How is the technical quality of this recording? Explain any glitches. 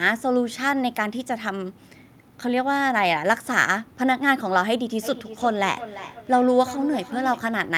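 The recording has one clear fault. Feedback echo between two devices runs from 5.03 to 7.48 s: a second device in the same room plays back this microphone's audio, and the microphone picks it up again, so the loop escapes echo cancellation. The speech returns roughly every third of a second, each repeat thinner and more ringing than the last, with the loudest reaching about 13 dB below the direct speech.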